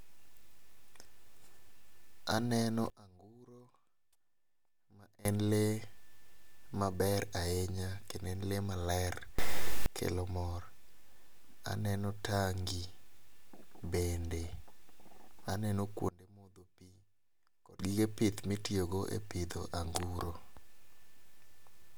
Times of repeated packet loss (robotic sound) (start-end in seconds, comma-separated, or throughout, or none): none